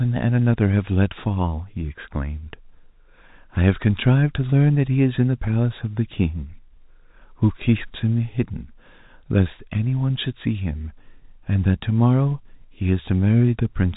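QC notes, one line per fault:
No faults found; the speech sits on a telephone-grade path consistent with G.711 mu-law, with nothing above 3.8 kHz and only faint coding noise riding under the signal.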